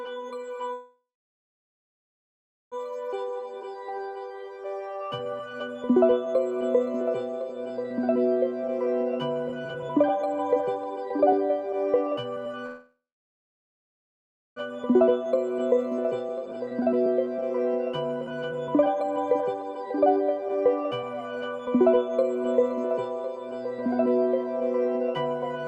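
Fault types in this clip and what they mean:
call audio freeze: The sound halts for about 2 s, at 0.73–2.74 s and again at 12.66–14.58 s. The last sound trails on briefly, then goes silent for most of each gap. Delayed packets likely emptied the jitter buffer. Playback resumes where it stopped, with nothing lost.
jitter buffer speed-up: After each freeze the receiver sheds the built-up delay by cutting out short pitch-period pieces. Five stretches between 3.39 and 22.60 s run 11 to 34% fast at unchanged pitch. The quickest are 7.21–12.54 s and 18.21–22.60 s, which sound clearly hurried.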